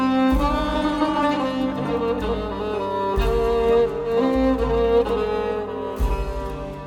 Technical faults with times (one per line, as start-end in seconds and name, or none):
none